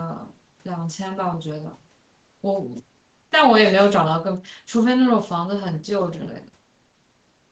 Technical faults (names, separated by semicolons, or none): none